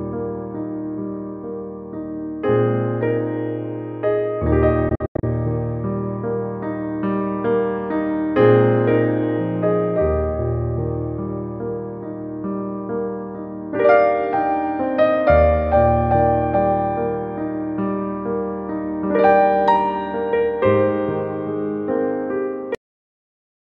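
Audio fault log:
4.89–5.24 s, Bluetooth dropout: Packets likely failed to reach the headphones in time and were discarded. The sound breaks into several short gaps totalling about 198 ms across 335 ms, the longest about 91 ms, then resumes further along as if playback had continued.
22.75 s, cut-off end: The final buffers were never written or played. The audio stops abruptly in the middle of a sound at 22.75 s and falls straight into digital silence with no natural decay, holding silent until the clip ends.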